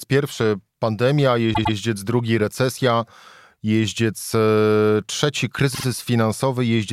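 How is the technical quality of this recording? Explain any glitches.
The recording has two stutters, both caused by repeated frames. A short run of compressed frames was sent to the decoder more than once, so it played the same slice of audio again. At 1.53 to 1.74 s, a 104.5 ms block plays three times in a row, adding 209 ms. At 5.74 to 5.84 s, a 52.2 ms block also plays three times, adding 104.5 ms. Each repeat sounds like a brief stammer.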